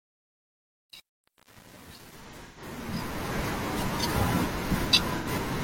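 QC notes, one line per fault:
0.00–3.39 s, truncation distortion on a fade: the fade's quiet part is gritty. The coarse, undithered level steps fit roughly 9-bit resolution, and the distortion clears as the fade completes at 3.39 s.
2.24–2.67 s and 5.17–5.27 s, AAC frame loss with concealment: the first span has about 256 ms of missing audio scattered across it, with the longest gap around 150 ms. The second has an 85 ms gap. The decoder fills each gap from the last good spectrum, which sounds smeared and noisy.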